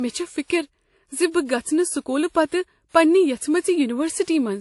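Across the whole speech clip, nothing is heard above about 11.3 kHz. The top end sounds dull, with two kinds of codec artefacts layered together. This likely comes from transcoding between lossy codecs, an MP3 pass at a low bitrate followed by WMA re-encoding that coded the earlier damage again.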